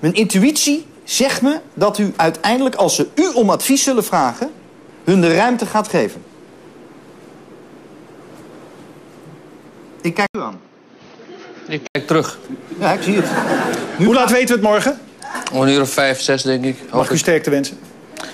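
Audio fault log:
2.93–6.55 s and 13.73–17.02 s: Bluetooth SBC bit pool drop. In both stretches the treble dulls and a gritty, granular noise rides on the sound, then clears when the rate recovers. The encoder had fewer bits per frame, so the top sub-bands were starved and the remaining ones coarsely quantised. The sound fits the bit pool being halved from 28 to about 14, near 108 kbps, as the link congested.
10.27–11.95 s: input switched to a poorer device. The sound drops out for about 80 ms, then returns narrower and boxier, with nothing above 6.4 kHz, a few decibels quieter, and with a new background hiss sitting well below the signal, around 45 dB down. This is likely the system changing to a different microphone or a headset call profile, whose narrower band, own tone and own noise floor replace the original path for this span.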